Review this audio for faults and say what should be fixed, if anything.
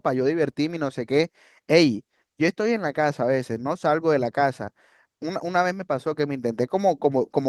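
Nothing should be fixed, because the review found no faults in this speech audio.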